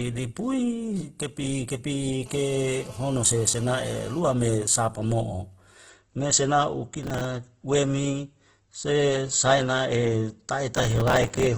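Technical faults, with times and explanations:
throughout: Opus compression. The audio is grainy and rough, with the tonal parts of the speech turned noisy rather than swirling, and nothing is heard above 12.2 kHz. The damage is heavy. This is likely Opus in its music (CELT) mode at a very low rate, plausibly around 12 kbps, with a super-wideband ceiling. Short of bits, the encoder keeps each band's energy but fills the detail with folded or noise-like content.
2.26–4.20 s: GSM phone buzz. A hard, raspy buzz at 217 Hz, rich in harmonics, sits under the speech at about 22 dB below it and holds steady for nearly two seconds, unrelated to what is being said. A 2G phone in a call nearby is transmitting in bursts 217 times a second. The audio circuitry rectifies those radio pulses, turning each one into a click, and the regular train of clicks is heard as the buzz.
4.21–6.25 s: GSM signalling bursts. 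Straight after the steady buzz, the interference changes to even ticks with a longer 217 Hz buzz twice a second, far quieter, at around 35 dB below the speech. This is the pattern of a phone in a call whose user has gone silent. It stops sending continuously and transmits only sparse groups of bursts, which the audio circuit again rectifies into these ticks and short buzzes.
7.03–7.25 s and 10.75–11.47 s: processor overload crackle. Gritty tearing crackle rides on the sound for about 0.21 s in the first stretch and about 0.72 s in the second, stopping each time the stretch ends. The processor repeatedly failed to finish its small audio buffers on time, which fits buffers of around 5 ms. Each miss replays a sliver of old audio with hard edges. The second stretch is longer and holds many more of these misses.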